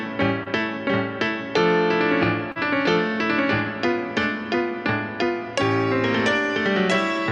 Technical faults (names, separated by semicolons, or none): short concealed packet loss